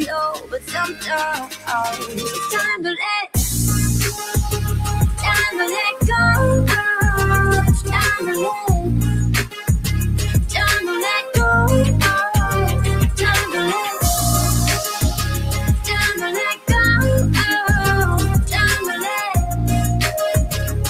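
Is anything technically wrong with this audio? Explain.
Yes. There are three problems.

DC offset, throughout. The whole waveform sits shifted off the zero line by a constant amount. You can't hear it as a tone, but it wastes headroom, so peaks on one side reach the ceiling sooner. On a spectrum it shows as steady energy at the very bottom, right at 0 Hz. It can also make edits or starts and stops click.

Noise suppressor applied to music or sounds, throughout. A suppressor tuned for speech was left running. It treats anything steady or lingering, such as ambience, sustained tones and reverb tails, as noise to be removed. The level keeps riding up and down by roughly 5 dB. Sharp onsets come through, but whatever follows them sags, so the sound pumps and thins instead of holding steady.

Sound cut by the noise suppressor, at 0.33–1.11 s, 1.36–1.7 s, 1.92–2.38 s, 4.12–4.36 s, 9.46–9.69 s, 16.14–16.38 s and 16.54–16.69 s. 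In these spans the suppressor decided the material itself was noise and pulled it down harder than its usual swing. The drop is about 14 dB at 0.33, 1.36 and 9.46 s, about 16 dB at 16.54 s, and about 6 to 9 dB in the others. Sustained or decaying parts simply sink away or end early, with the densest cluster in the first two and a half seconds.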